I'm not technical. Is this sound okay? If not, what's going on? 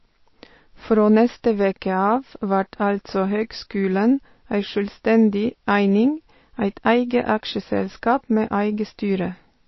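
No. Throughout, the speech sounds dull and watery, with nothing above 5.8 kHz, which is the kind of damage heavy MP3 compression likely causes.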